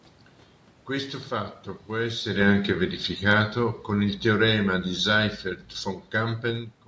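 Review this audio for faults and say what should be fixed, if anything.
Automatic gain falling runs from 1.93 to 5.48 s. The gain control judged the input too loud, or its background noise too strong, and pulled its gain down by about 5 dB. The voice sinks gradually, and the room noise sinks with it. The talker also shifts position around 2 s, which is separate from the gain drop. To prevent it, lower the input level at the source so the gain control has no reason to cut back.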